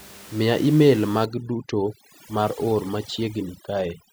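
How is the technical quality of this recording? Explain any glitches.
The recording has one clear glitch. From 1.25 s to the end, the speech shows overdone noise removal. A noise reducer set too aggressively keeps cutting individual frequency bands whenever they drop near its noise estimate, taking quieter parts of the voice with the room noise. That room noise sits about 20 dB below the speech before 1.25 s. After that point the background collapses toward silence with twinkling specks.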